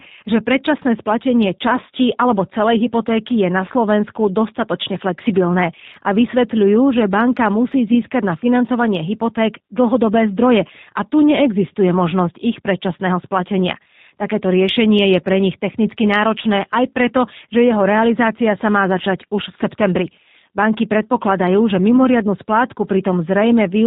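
Throughout, the speech sounds slightly rough, buzzy and synthetic, with nothing above 4 kHz, the sound of G.729 codec coding, which fits an 8 kbit/s VoIP stream.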